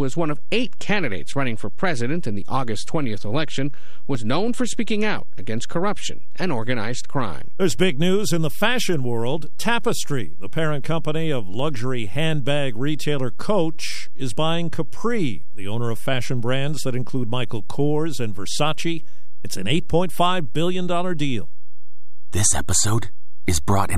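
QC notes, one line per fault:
Throughout: DC offset. The entire speech waveform sits shifted off the zero line by a constant amount, so every sample carries the same bias. It cannot be heard as a sound, but it shows as steady energy pinned at the very bottom of the spectrum and eats into headroom, leaving less room before peaks clip on one side. Removing the offset with a high-pass filter or DC correction recentres the signal.
4.15 s: audio missing between chunks. A tiny slice of audio, only a few milliseconds, drops out just before "known for speaking out", and the audio on either side is butted together with no silence in between. The join comes across as a brief skip. The likely cause is a chunked recorder or processor losing a sliver of signal while closing one block and opening the next.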